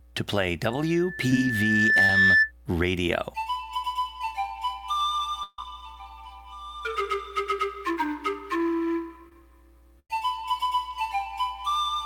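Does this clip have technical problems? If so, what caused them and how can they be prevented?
Yes. From 0.70 s to 2.52 s a single tone at 1.8 kHz swells over roughly a second and a half until it sits about 10 dB above the rest of the sound. This is a loudspeaker feedback squeal: a microphone was picking up the loudspeaker it fed, and at 1.8 kHz the loop gain went above one, so that frequency kept amplifying itself. It can be prevented by lowering monitor gain, moving the microphone away from or behind the loudspeaker, or notching 1.8 kHz.

Brief smears and wobbles are audible at 1.30 s, from 2.05 s to 2.09 s, and from 9.29 s to 9.41 s. These are short concealed packet losses. Each time, roughly 10 to 30 ms of audio arrived too late or not at all, and the receiver covered the gap by extending the preceding sound before blending back in. Near 9.3 s a few milliseconds of real audio were also dropped. 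These can be prevented with a more stable network path or a larger jitter buffer.

Longer gaps occur from 5.43 s to 5.59 s and from 9.99 s to 10.10 s. In each, the sound turns into a held buzz or fading hiss, then resumes further on. These are bursts of packet loss, about 150 ms and 100 ms long. Several consecutive packets were lost, so the concealment stretched the last sound and faded it, and the audio in between is gone. Forward error correction and a less congested connection would help prevent them.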